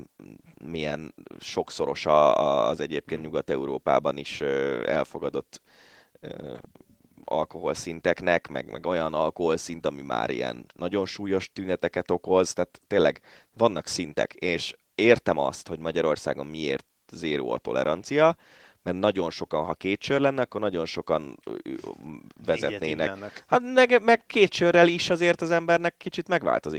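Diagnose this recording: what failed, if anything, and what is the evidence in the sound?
Nothing in the chain failed: the speech carries only the light coding texture of Opus voice compression working in its hybrid fullband mode, which fits a rate around 20 kbps, and no other stage from capture to playback leaves any audible mark on the signal.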